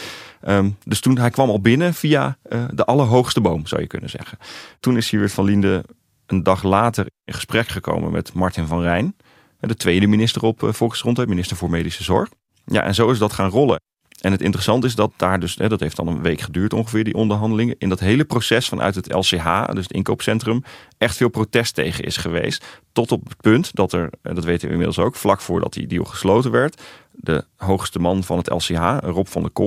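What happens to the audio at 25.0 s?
Nothing goes wrong at 25.0 s: the speech continues intact through that moment, with no dropout, click, distortion or other fault to be heard.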